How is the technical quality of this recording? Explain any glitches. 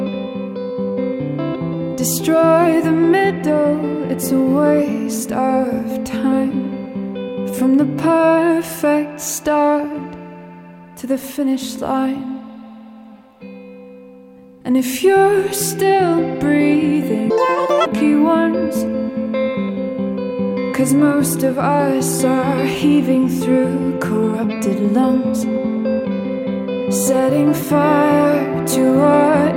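One glitch stands out. From 17.30 to 17.86 s, the audio was read two samples at a time (double speed). Pairs were taken as one frame. Sound races at twice speed, an octave high.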